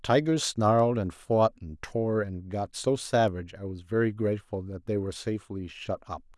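At 0.79 s and 3.28 s, bit error spikes: a flipped bit throws a sample briefly off by a power of two, giving an isolated broadband tick near -32 dBFS, unrelated to the speech.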